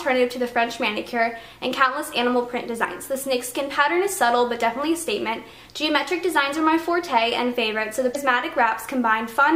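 Underrun with held sample at 0.52 s: the output buffer ran dry for under a millisecond, so the converter held its last value, flattening the waveform and dropping about a millisecond of audio. Damaged data in a compressed stream at 2.81 to 2.85 s and 8.11 to 8.16 s: corrupted frames threw the decoder out of sync, giving a brief chirp, squawk, click or hole while it resynchronised.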